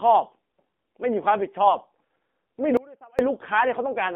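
Speech heard through the AMR narrowband mobile codec for its whole length: nothing passes above about 3.5 kHz or below 200 Hz, and the voice has a buzzy, synthetic edge. That level of damage fits the low 7.4 kbps mode, and it differs from plain band-limiting because the timbre itself is remodelled. From 1.66 to 1.77 s, AMR bit errors make the voice briefly hoarse and gargly while its pitch and level hold. That span fits about five 20 ms frames hit by a few percent flipped bits. Unlike a lost frame, which would leave a gap or a smoothed-over concealment, the sound keeps going but is scratchy. From 2.77 to 3.19 s, an audio dropout to a faint residue cuts the signal off abruptly for 417 ms, leaving only a faint trace about 25 dB down. This is likely a break in the wanted signal while the path after it stayed live, and the hard edges rule out a natural pause or fade.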